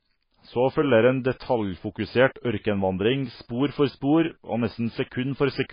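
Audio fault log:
Throughout, MP3 compression. The speech has nothing above 5 kHz and sounds watery and swirly, with smeared attacks. Heavy damage like this likely comes from MP3 at a very low rate, near 18 kbps. Short of bits, the encoder cuts the treble and drops weak frequency components.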